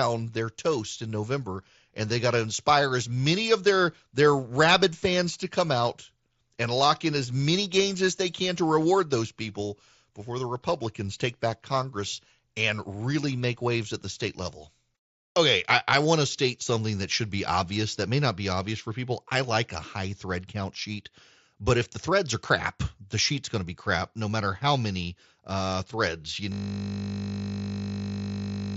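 A system hang loop begins at 26.52 s and runs to the end: a stalled system leaves the hardware replaying one 20 ms buffer, producing a steady 50 Hz buzz.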